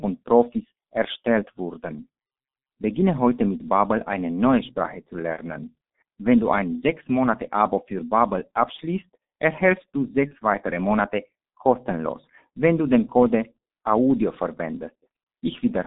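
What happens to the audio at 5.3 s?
At 5.33 s there's a brief dropout, VoIP packet loss concealed by the speech codec, running to about 5.38 s; the gap fits a single lost 30 ms frame. The decoder fills it by extending its last pitch and filter with falling gain, so you hear a short buzzy or noisy, fading smear, and the speech stays weak or distorted just after.

Underneath, the heavy G.723.1 codec is there the whole time: roughly a 200 Hz to 3.7 kHz band at 6.3 kbit/s, which makes the speech muffled and hoarse with blurred consonants.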